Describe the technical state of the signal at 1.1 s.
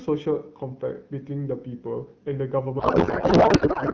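At 1.1 s the speech signal is intact, with no fault present.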